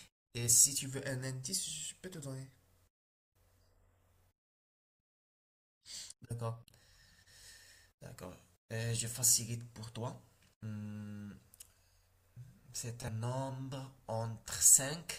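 At 13.05 to 13.09 s the speech breaks with a short blip lasting about 40 ms. This is damaged data in a compressed stream. Some bytes there were corrupt. The decoder misread those frames, lost sync and had to find the next valid frame header.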